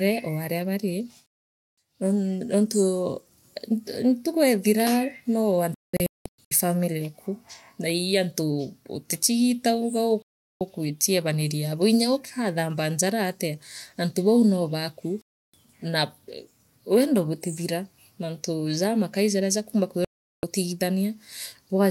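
The speech suffers repeated digital broadcast dropouts. At 1.26 s it mutes for about 0.51 s. At 5.74 s it breaks into several short holes across 0.77 s, the longest about 0.19 s. At 10.22 s and 15.22 s it goes silent for 0.38 s and 0.32 s. After "jamakai jaria jakumba", at 20.05 s, another 0.38 s vanishes. Each time the receiver lost the signal or rejected bad frames and muted. The audio sent during those gaps is simply gone.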